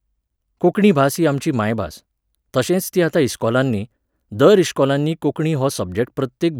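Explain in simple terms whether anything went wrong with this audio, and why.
Nothing went wrong; the speech has no audible faults.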